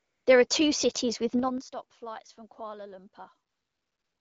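AMR comfort noise fills 0 to 0.25 s, 0.47 to 0.49 s just before "cities with", and 3.49 s to the end. The phone sent no speech frames, so the receiver substituted synthetic hiss. On a spectrogram these stretches are smooth, featureless bands that switch on and off abruptly, within AMR-WB's band.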